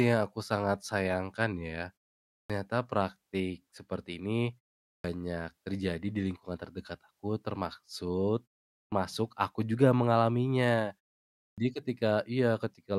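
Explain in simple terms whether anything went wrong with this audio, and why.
Four times the speech restarts after a short pause with its opening cut off, a fault called clipped start after a pause. It happens at 2.43, 4.97, 8.85 and 11.5 s, each after roughly half a second of silence. For example, the start of "terjadi di lingkungan terdekat" and of "aku juga mengalaminya" is missing. The playback device drops into a low-power state during the pause and needs 67 to 77 ms to wake, so the first sound of each phrase is lost and the speech begins abruptly.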